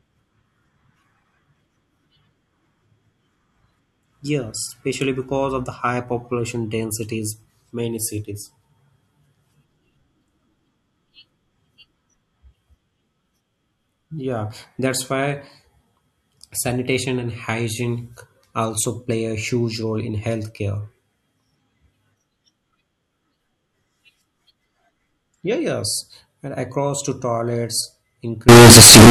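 From 28.49 s to the end at 29.10 s, the speech turns into a harsh, nearly square wave at an almost fixed, high level. Background noise rises to match the voice, though pitch stays traceable. This is likely float read as integer, with 32-bit float samples decoded as 32-bit integers.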